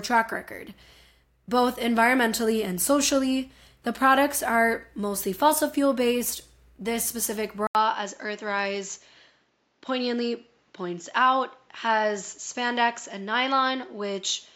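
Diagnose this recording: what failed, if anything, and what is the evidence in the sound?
Input switched to a poorer device at 7.67 s, likely in the driver: an 80 ms gap, then nothing above 7.5 kHz and new noise about 45 dB down.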